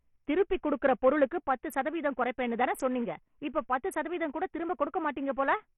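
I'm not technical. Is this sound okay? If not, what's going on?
No. The speech has most likely been sent over a Bluetooth link using Bluetooth SBC compression, the basic codec many wireless headphones and speakers fall back on, squeezed hard to fit a thin connection. To save space it throws away the finest detail: nothing is left above 14.6 kHz, so the crisp top end is gone, and the remaining sound is roughly rounded off, leaving a gritty, rough edge on the voice all the way through.

Then, at 1.48 s, there is a sudden gain jump, likely from a volume or level setting being changed instantly instead of being eased in gradually. From that moment to the end, the voice and the background noise both drop noticeably in loudness together, as if someone abruptly turned the volume down a notch, and the clip stays at that lower level until it finishes.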